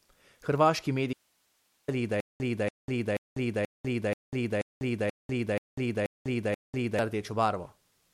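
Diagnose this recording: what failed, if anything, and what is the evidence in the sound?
An audio dropout to a faint residue runs from 1.13 to 1.88 s, about 0.75 s lost, leaving only hiss roughly 45 dB below the speech. The likely cause is an intermittent connection in the analogue wiring upstream, with the later stages still live. On a spectrogram it shows as a hard-edged band of faint broadband noise.

A stutter with silent gaps repeats ten times from 2.20 to 6.99 s: the same 285 ms burst, then 198 ms of digital silence, every 482 ms. This points at playback, likely a stalled stream buffer replaying its last fragment on each retry, and the speech for that stretch is lost. A waveform shows identical blocks separated by near-flat silent stretches.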